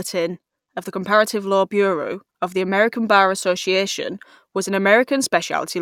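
Nothing in this bit of speech stands out as a technical fault, so there's nothing to flag here.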